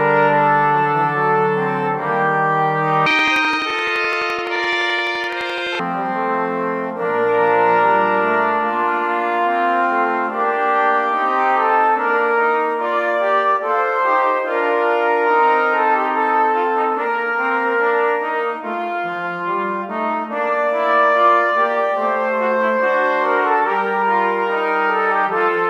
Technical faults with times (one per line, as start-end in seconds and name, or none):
3.06-5.85 planar audio read as interleaved